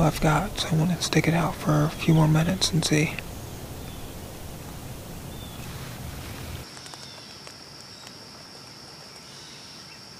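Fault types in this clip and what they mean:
Nothing here stands out as a problem; the audio runs along without any dropouts, glitches or other faults to point at.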